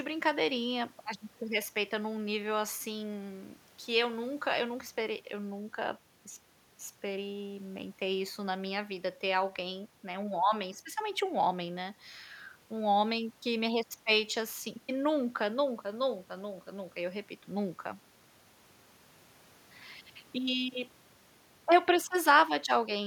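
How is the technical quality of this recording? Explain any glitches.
The recording is technically sound, with no glitches or defects to report anywhere in the speech.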